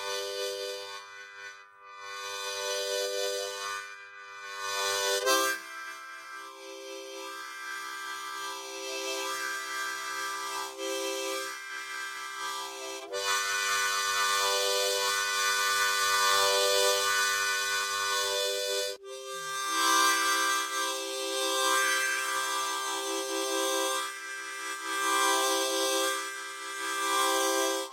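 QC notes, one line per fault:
No problems stood out on listening to this recording of sounds.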